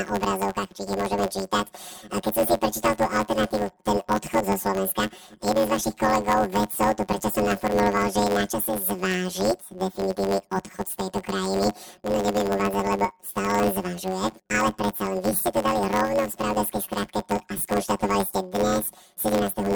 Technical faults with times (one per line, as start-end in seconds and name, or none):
0.00-19.76 planar audio read as interleaved